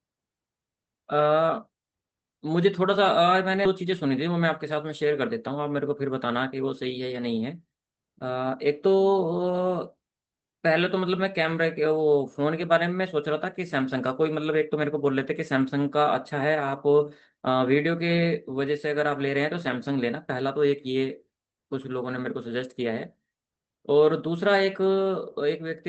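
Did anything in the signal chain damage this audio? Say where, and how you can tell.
Yes. At 3.65 s the speech jumps forward with no gap, with around 0.4 s missing. This is a skip ahead at the network jitter buffer, which dropped audio that was already queued.

From 3.75 to 4.85 s the speech sounds hurried, running 6% fast at unchanged pitch. This is jitter buffer speed-up, which trims pitch periods to shed roughly 70 ms of excess delay.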